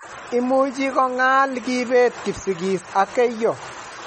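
Throughout, the speech shows plainly audible MP3 compression, likely from a low bitrate near 32 kbps. The spectrogram is blank above 8.3 kHz, and its upper bands flicker from frame to frame, giving a watery, swirly sound.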